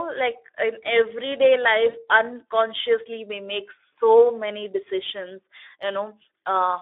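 Throughout, the speech carries Speex codec damage: a hoarse, noisy graininess, which fits a bitrate near 11 kbps. A spectrogram shows energy confined to a telephone band of about 300 Hz to 3.6 kHz, with smeared, noisy harmonics.

From 1.89 to 2.00 s, VoIP packet loss concealed by the speech codec stretches the last sound into a fading extrapolation, consistent with two lost 20 ms frames. The waveform shows a repetitive, decaying stretch, and the spectrogram shows flat, smeared harmonics before the speech recovers.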